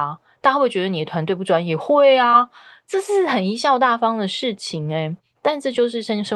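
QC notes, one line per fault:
2.31–2.35 s and 4.83–4.87 s, short concealed packet loss: in each spot about 20 ms of the call arrived too late to decode, which fits one lost packet. The receiver bridged the hole by extending the preceding sound and then crossfaded back, so there is a brief smear or wobble rather than silence. Unlike a true dropout or click, there is no hard gap or sharp edge, only a momentary unnatural sustain.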